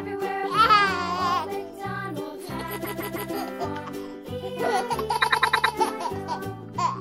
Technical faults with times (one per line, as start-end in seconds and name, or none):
2.84-3.31 repeated frames
5.21-5.74 repeated frames